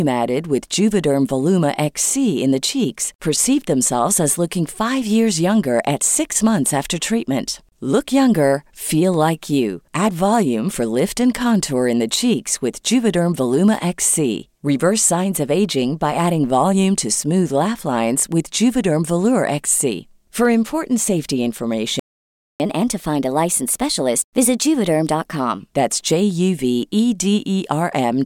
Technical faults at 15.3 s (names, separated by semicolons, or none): none